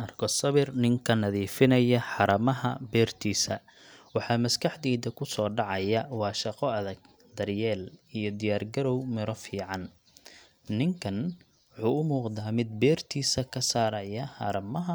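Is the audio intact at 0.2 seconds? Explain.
Yes, the speech at 0.2 seconds plays cleanly, with no dropout, click, distortion or other fault at that moment.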